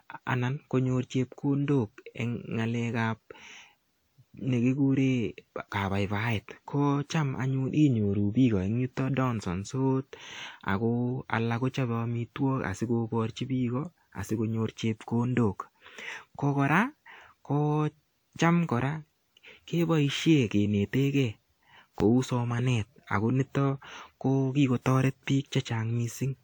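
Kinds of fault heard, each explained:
Generation loss: Throughout the speech there is a swirling, smeared quality with a hollow, phasey edge, and consonant onsets sound softened rather than crisp, more degraded than a single encode would leave. The likely cause is repeated lossy coding, around five passes through a WMA-type codec at a rate consistent with 128 kbit/s, each re-quantising on a shifted frame grid so the artefacts stack. The band still reaches about 20.1 kHz.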